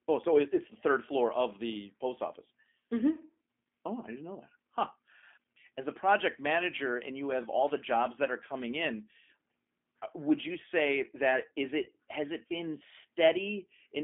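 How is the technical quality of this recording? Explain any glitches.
The recording has narrowband telephone quality with audible codec roughness, and one brief dropout near the end.

G.729 codec, throughout: the low-rate 8 kbit/s coder rebuilds speech from a filter and sparse pulses, so it sounds rough and slightly synthetic. On a spectrogram, energy sits only between about 250 Hz and 3.5 kHz.

VoIP packet loss concealed by the speech codec, 11.84 to 11.89 s, between "you say that is" and "has it been": about 20 ms went missing, consistent with one lost packet. The decoder extrapolated it as a fading buzzy tone or coloured noise, and the speech stays weakened briefly afterward. The waveform shows a dip in amplitude, and the spectrogram shows smeared harmonics.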